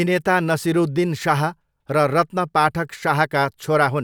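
No dropouts, distortion, level jumps or other technical faults can be heard anywhere in the recording.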